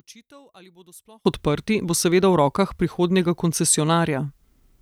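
Speech whose first 1.25 s sinks about 31 dB to a faint residue before "odprti bo seveda v", likely one channel inverted cancelling in mono; a dropout would leave silence instead.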